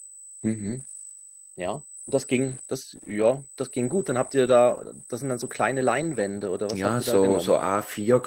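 A speech recording with USB whine running through its whole length: a steady, fixed-pitch tone at 8 kHz, sitting roughly 15 dB below the speech, so it is clearly audible in pauses. The 8 kHz pitch matches the 125-microsecond microframe rate of a USB bus, whose current draw is leaking into the audio through power or ground. A spectrogram would show a thin, unbroken horizontal line at 8 kHz from start to finish.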